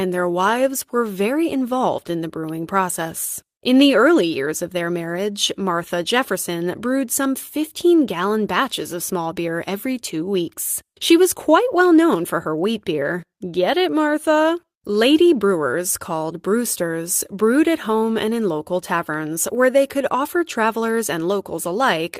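No technical faults can be heard anywhere in the speech. At no point does the audio break from normal playback.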